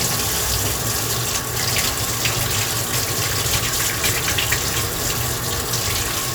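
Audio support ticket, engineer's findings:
Nothing to flag on this one: listened through the whole sound recording and didn't hear any fault, so no component to chase.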